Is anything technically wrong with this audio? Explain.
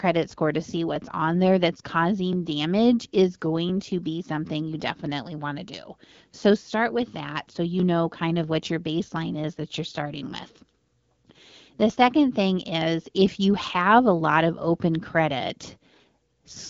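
Yes. Clock drift buffer slips are the likely cause. Two devices running several hundred parts per million apart force the buffer between them to drop or repeat a few dozen samples every 1.36 s. From 0.96 s, just after "score to see", until 16.0 s, this produces about ten regular clicks.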